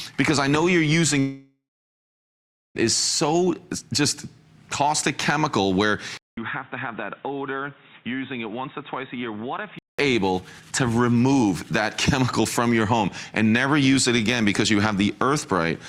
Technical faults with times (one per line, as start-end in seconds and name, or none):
1.19-2.77 long network dropout
6.17-9.99 input switched to a poorer device